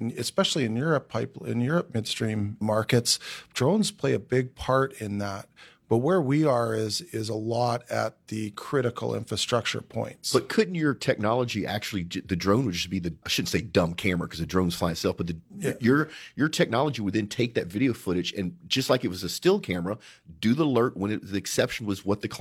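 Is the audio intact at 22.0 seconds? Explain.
Yes, the audio is intact at 22.0 seconds, with no audible fault at that point.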